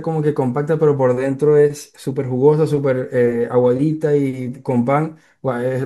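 Nothing technically wrong turns up anywhere in this bit of speech, so there's no fault to point to.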